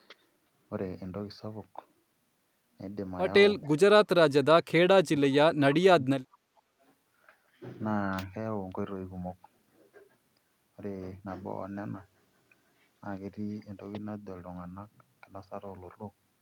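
From 3.64 to 3.79 s, a very faint delayed copy arrives about 447 ms late. This echo leak likely comes from a loudspeaker echo canceller missing residue. From 4.89 to 5.6 s and 5.79 to 6.1 s, speech drops deeply in pieces. This is likely speech suppressed in double talk, with both sides talking at once.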